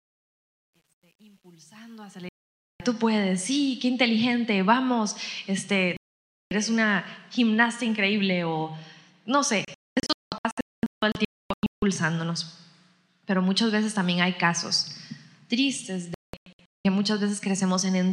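From the start to 2.91 s, the fade-in carries truncation distortion. The gain stage keeps about 10 bits without dither, so the quiet part turns into coarse steps. It is worst from 0.00 to 2.27 s, where the sound is gritty.

At 2.29 s the first digital broadcast dropout cuts in. The receiver lost good frames and muted for 0.52 s, until 2.80 s. A second mute runs from 5.97 to 6.52 s. That material is gone.

From 9.65 to 11.83 s the dropouts come scattered. Several short holes add up to about 1.57 s of loss, the longest 0.26 s. A last cluster runs from 16.14 to 16.85 s, with holes up to 0.19 s long.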